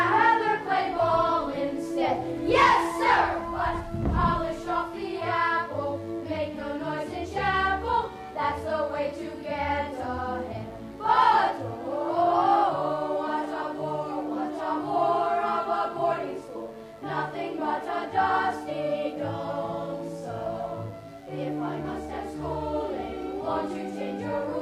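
A steady, raspy mains buzz runs throughout, built on 50 Hz harmonics from switching spikes leaking in, sitting roughly 30 dB below the signal.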